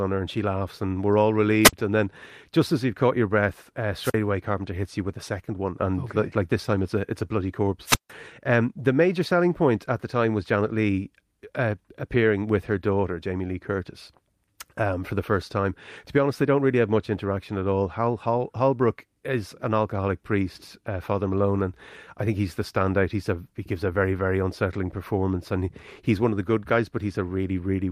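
Speech with three wireless microphone squelch dropouts, at 1.63 to 1.73 s, 4.00 to 4.16 s and 7.84 to 8.12 s. Each brings a burst of hiss, then a hole of near silence lasting about 53, 44 and 160 ms. The radio signal fades and the receiver's squelch mutes the output.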